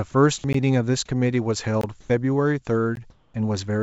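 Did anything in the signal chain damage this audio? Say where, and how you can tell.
Yes. The first fault is a block of digital silence at the driver or buffer stage. Short holes drop to silence at 0.53 s, 1.81 to 1.84 s and 2.96 s. The two 16 ms gaps and the 21 ms one fit the output buffer missing its deadline, the longer one matching a 1024-sample buffer. Unlike a network dropout, nothing is concealed or smeared. The audio simply stops dead and resumes abruptly.

The second fault is comfort noise in place of the background, from call processing. From 2.01 to 2.10 s and from 3.10 to 3.34 s, the background, sitting about 30 to 32 dB below the loudest passages, turns into a steady, detail-free hiss that differs in level by only about 1 and 2 dB. The likely cause is discontinuous transmission substituting synthetic noise during pauses. Unlike digital silence, these stretches never reach zero, just a change in texture. 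Through all of this the call codec's band stops at 8 kHz.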